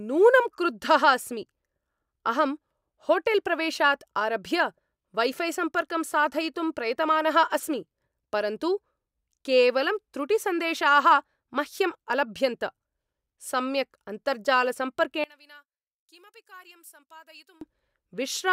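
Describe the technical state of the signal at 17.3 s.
At 17.3 s the speech nearly vanishes, dropping about 27 dB from 15.24 to 17.61 s. The likely cause is one channel inverted, cancelling centred speech when summed to mono.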